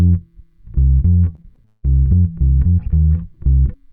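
From 1.35 to 1.85 s, repeated packet loss (robotic sound) sets in: audio data keeps failing to arrive in time, and each hole is papered over by stretching out the sound that came just before it. About half of that half-second is concealed rather than real, with the longest hole near 176 ms. The result is a choppy stutter in which pieces of the audio drop out and are replaced by a continuation of the preceding sound.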